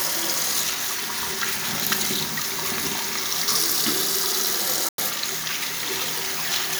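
A Bluetooth dropout runs from 4.89 to 4.98 s. For about 93 ms the sound disappears into silence with abrupt or briefly faded edges, then returns already further along, as though it had kept playing through the gap. The likely cause is wireless packets that failed to reach the headphones in time and were discarded, so the output had nothing to play until valid data arrived again. A gap of this length fits roughly five lost packets.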